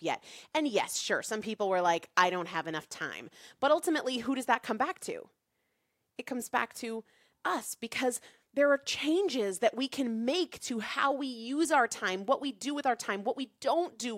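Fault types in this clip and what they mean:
No technical faults are audible anywhere in this speech recording.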